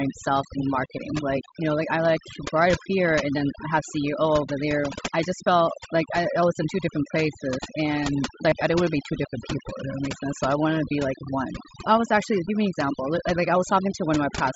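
Overdone noise removal runs through the whole recording. The noise reduction was set too aggressively, so any frequency band that sits close to its noise estimate is pulled far down or switched off entirely, and the softer components of the speech are removed along with the noise. The background drops and breaks up into twinkling specks, while the speech itself has its weaker detail eaten away.

Concealed Bluetooth headset packet loss occurs twice, at 4.82 s for about 15 ms and from 8.49 to 8.52 s for about 22.5 ms. In each case audio between headset and phone went missing, and the receiver filled the hole by repeating the closest-matching stretch of the preceding waveform. Each leaves a brief buzzy, held quality and a slight warble as real audio resumes. The mSBC link carrying the speech contributes its light graininess on louder sounds.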